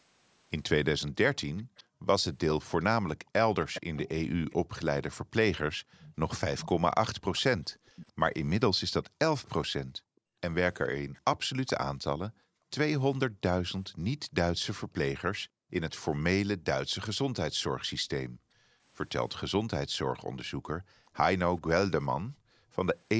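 From 1.07 to 13.88 s there's an echo leak: a delayed copy of the speech trails the original by about 424 ms, sitting around 15 dB under it. The likely cause is a speakerphone on one side whose echo canceller didn't fully scrub what its mic picked up off the loudspeaker, so that residue got sent straight back. It comes across as a faint ghost of the speech, arriving just under half a second late.

Meanwhile, from 1.63 to 2.07 s, the background is gated by the echo canceller. While the loudspeaker was playing, the canceller clamped the mic down hard, up to about 40 dB. For roughly 400 ms the room tone simply vanishes and then pops back when the canceller lets go.

The same gating returns across 5.78 to 22.73 s, dipping the room sound by up to about 40 dB at points that add up to roughly 3 s. You get intermittent holes in the background rather than one long dropout.

Near the end, at 21.06 to 21.11 s, there's one more tiny scrap of echo leak at the same 424 ms delay. 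It's very faint, barely above nothing, just a brief ghost flicker.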